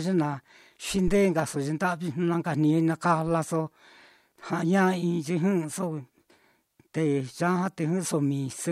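A deep, low thump lands in this speech recording between 1.08 and 1.20 s, peaking at about -18 dBFS and dying away within roughly 28 ms. It is a phantom power thump: the supply to the microphone was switched while the input was live, and that sudden DC step leaked through the coupling capacitors as a single low-frequency pulse that the circuit then drained off as a brief, fast-decaying bump.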